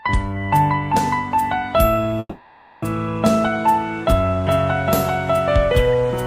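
From 2.19 to 2.84 s a call audio freeze stretches the last sound into a fading buzz, likely from a starved jitter buffer; spectrogram shows smeared repeated texture, nothing lost.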